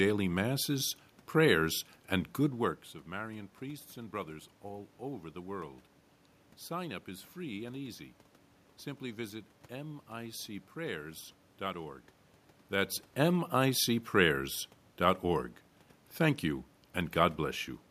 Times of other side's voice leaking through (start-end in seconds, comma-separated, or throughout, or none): none